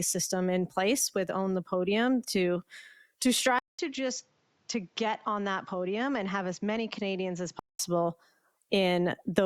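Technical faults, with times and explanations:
3.59–7.79 s: input switched to a poorer device. The recording likely jumped to a lower-grade input for this span. After a 200 ms gap the speech loses everything above 7.6 kHz, drops roughly 5 dB and picks up fresh background noise about 40 dB down, sounding duller until it clears.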